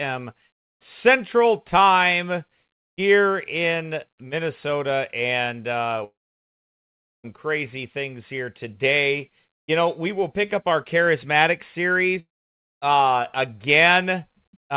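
A long network dropout is the likely cause at 6.04 to 7.27 s, after "and uh": about 1.2 s of audio went missing and the gap is mostly silence before the sound resumes with "crazy things here today". The same fault likely recurs at 12.20 to 12.70 s, after "pick up our charismatic", with about 0.48 s lost, nearly all of it silent. Throughout, the narrowband call path leaves nothing above 4 kHz, which fits G.711 mu-law.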